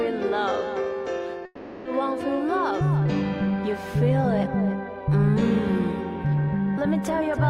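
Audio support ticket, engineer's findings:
Sound smeared into a fading buzz or hiss at 1.45 s, running to 1.87 s; no true silence, about 0.4 s of audio absent when playback resumes. Long network dropout, likely cause: packets stopped arriving at the receiver for roughly 0.4 s. Jitter buffer/concealment stage extended the last received sound to cover the gap, then restarted on newer audio with the lost stretch skipped.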